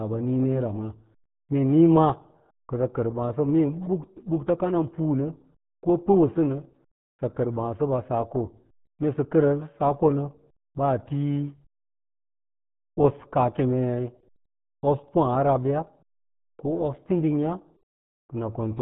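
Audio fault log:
throughout: RealAudio 14.4 codec. The speech is muffled and gargly, with a watery, bubbling edge, which fits a heavily compressed dial-up speech codec running at around 8 kbit/s. On a spectrogram, all energy stops at a flat ceiling of 3.9 kHz with empty space above, and the harmonics below look smeared and blotchy. The waveform looks coarse: the encoder keeps only a rough outline of each sound and discards fine detail.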